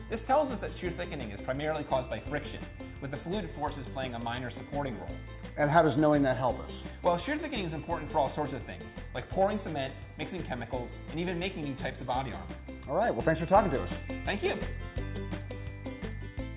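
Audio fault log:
Nothing stood out on listening to this recording.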